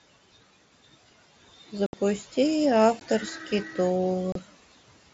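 Speech recorded over a Bluetooth headset, with noise suppressor artifacts throughout: the room noise is pulled down by about 17 dB between phrases and rises back under the speech. Unlike a hard gate, the background never fully cuts out, it just breathes with the speech. Unconcealed Bluetooth headset packet loss breaks the audio at 1.86–1.94 s (about 70 ms), at 3.00 s and at 4.32–4.36 s (30 ms). Each gap is a short hole with abrupt edges rather than a smeared or repeated fill. That points to lost headset frames nobody patched over, not to the mSBC codec's own band dropouts, which leave the lower speech intact.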